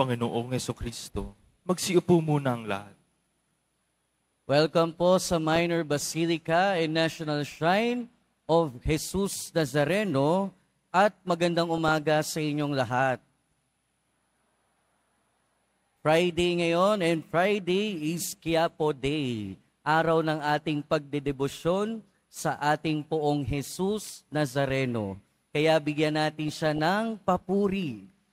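Brief blips of noise break through the sound at 5.52 to 5.59 s, 11.78 to 12.03 s and 26.48 to 26.79 s. This is DAB burbling: weak reception leaves residual bit errors that corrupt MP2 scale factors and samples, making individual sub-bands jump in level frame by frame.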